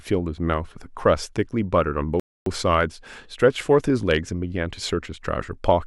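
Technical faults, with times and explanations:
2.20–2.46 s, playback stall: the speech cuts off in mid-flow and the output goes silent for about 265 ms before the sound picks up again. The likely cause is the player running short of buffered data, or its playback thread being held up, so nothing reached the output until it recovered. Because the gap is a clean silence rather than a click or a garbled patch, it reads as a pause forced on the audio, not as part of the speech itself.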